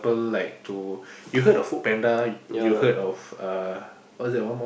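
Speech recording with no technical faults heard.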